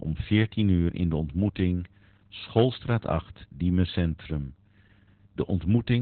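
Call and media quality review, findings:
Muffled, hoarse, slightly robotic speech throughout; nothing above 4.2 kHz. Opus voice compression in narrowband SILK mode, coarse excitation coding, pointing to a very low bitrate around 8 kbps.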